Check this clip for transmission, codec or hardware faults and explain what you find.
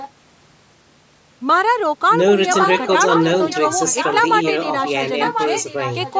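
One fault runs through the speech: an echo leak, heard in seven separate stretches.

Echo leak appears at 0.00–0.09 s, 2.51–2.90 s, 3.15–3.24 s, 3.48–4.15 s, 4.43–4.53 s, 4.85–4.91 s and 5.08 s to the end. The likely cause is a far end on a loudspeaker whose echo canceller let some of the returning speech through. It comes back about 1.04 s late, as a second, fainter layer of speech. It ranges from roughly 15 dB below the main speech to only about 5 dB below it, loudest at 2.51–2.90 s, 3.15–3.24 s and in the final stretch.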